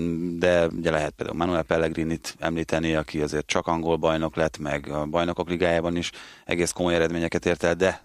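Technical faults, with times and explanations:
Nothing technical stands out in this speech recording; there's no fault here to point to.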